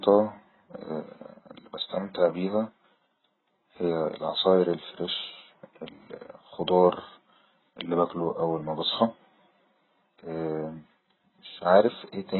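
From start to finish the speech is band-limited, with nothing above 4 kHz, and sounds dull, smeared and watery, with a warbling, fizzy edge on sustained sounds and sibilants. The likely cause is heavy AAC compression: at a bitrate that fits roughly 12 kbps, the encoder drops the top band and coarsely quantises what remains. A simple low-pass filter would leave the lower spectrum clean, but here the remaining content is itself broken up.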